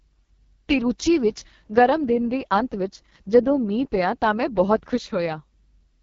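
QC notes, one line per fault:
Throughout: AMR wideband (HD Voice) codec damage, heavy. The speech has a rough, raspy, buzzy texture, consistent with the codec running at around its lowest rate, near 6.6 kbit/s. The vocal tract model and pulse excitation have too few bits to track the voice accurately, so detail smears into grit. Content stops near 7.4 kHz, and the top band above 6.4 kHz sounds like shaped hiss rather than real high-frequency detail.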